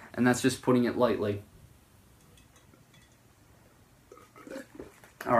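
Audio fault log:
Nothing stood out on listening to this audio.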